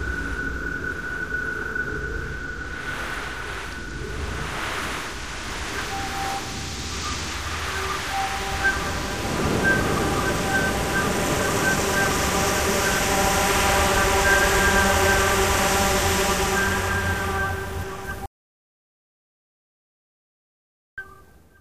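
It's a recording of sounds with an audio dropout to silence from 18.26 to 20.98 s: the sound cuts off abruptly, leaving about 2.7 s of dead silence with no room tone, then returns mid-flow. Likely the input was lost, through a disconnected device, a failed link or a stray mute, while recording carried on.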